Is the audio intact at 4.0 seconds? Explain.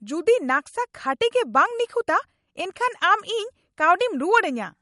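No. At 4.0 s the speech carries MP3 compression damage, as it does across the whole clip. Nothing is heard above about 11.2 kHz, so the treble is cut off flat. The damage is plainly audible. The likely cause is a lossy MP3 encode, one that fits a low bitrate near 48 kbps. With so few bits, the encoder drops the high band and discards weaker frequency detail. That leaves the sound dull and watery.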